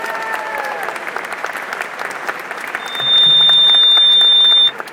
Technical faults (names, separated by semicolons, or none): loudspeaker feedback squeal